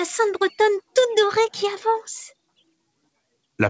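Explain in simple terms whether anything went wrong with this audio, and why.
Something did go wrong, between 2.47 and 3.09 s: the sound gets cut by the noise suppressor. It mistook part of the sound for background noise and pulled it way down, so for about a fifth of a second in total things dip sharply or trail off early.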